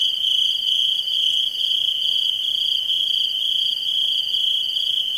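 No technical faults can be heard anywhere in the audio, and the signal holds steady throughout.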